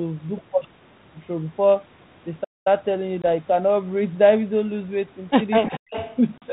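At 2.44 s the speech stops dead and stays silent until 2.67 s, a gap of about 218 ms, before resuming. This is a playback stall. The player likely ran short of buffered data or had its output thread blocked, so nothing reached the output until it caught up. The break is clean and silent rather than noisy.

From 3.22 to 3.25 s there is a short hard-edged hole of 20 ms, which fits one lost packet. This is packet loss on an ADPCM call. The missing audio was filled with silence, and the decoder's adaptive predictor and step size no longer matched the sender's. When the speech comes back it is slightly distorted before the decoder settles over a few tens of milliseconds.

From 5.61 to 5.94 s the speech is pulled down in level, at its deepest by roughly 40 dB, and breaks up over about 300 ms. This is speech suppressed in double talk. Both ends were likely talking at once. The echo canceller could not tell the local talker from loudspeaker echo, so it attenuated everything, and the voice dips and drops out in pieces.

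Overlapping this, from 5.69 to 6.16 s, a faint delayed copy of the speech is audible about 245 ms behind the original and roughly 15 dB below it. This is echo leak. The far end was likely on a loudspeaker, and its canceller left part of the microphone pickup in the return path.

From 6.38 to 6.51 s a second ADPCM packet-loss event removes 40 ms, consistent with two consecutive lost packets. The same pattern follows: a silent hole, then slightly distorted speech while the 32 kbit/s G.726 decoder's adaptation recovers.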